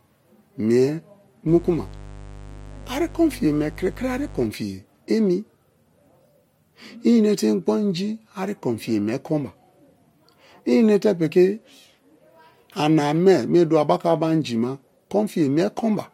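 From about 1.48 s to 4.46 s there's mains buzz under the speech, a steady raspy drone sitting maybe 20 dB below it. The spikes repeat twice per 50 Hz cycle, so harmonics stack up into the kilohertz range. That points to a dimmer, rectifier or poor shielding leaking in.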